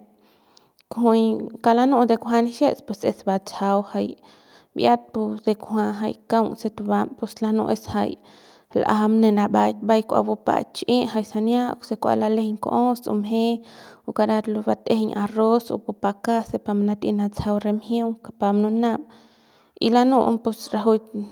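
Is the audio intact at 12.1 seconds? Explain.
Yes, the speech at 12.1 seconds plays through intact, with no dropout, click, distortion or other fault.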